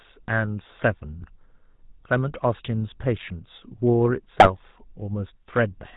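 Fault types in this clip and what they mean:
GSM full-rate codec: The speech passes through the original GSM full-rate coder for the whole clip, which fits a 13 kbps stream. The coder models the vocal tract as a filter and drives it with a regular pulse train that keeps only one excitation sample in three. That gives the voice a plainly audible buzzy, gravelly roughness. Nothing above 4 kHz survives, so the sound is dull and band-limited from start to finish.
GSM bit errors: Two short bursts of corrupted decoder data break through, from 1.15 to 1.25 s and from 4.36 to 4.51 s. When flipped bits land in the filter, pitch or gain values, a frame decodes with a bent spectrum or a sudden jump in level. The result is squawks, pops and gargling. The first burst is brief, about three frames long. The second is longer and harsher, which fits a higher error rate spread over roughly five frames.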